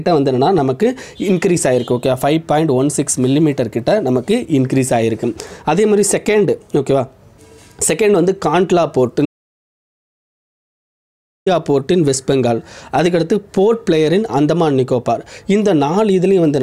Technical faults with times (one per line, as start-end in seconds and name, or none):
9.26-11.46 audio dropout to silence